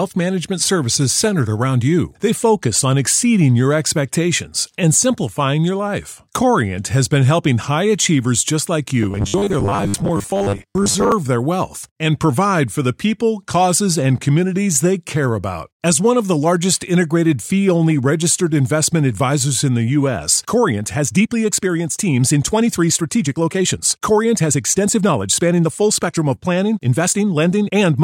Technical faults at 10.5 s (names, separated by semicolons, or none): robotic sound from repeated short buffers